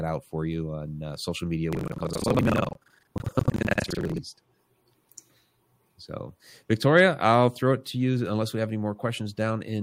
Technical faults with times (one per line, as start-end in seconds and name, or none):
1.71-4.19 buffer tearing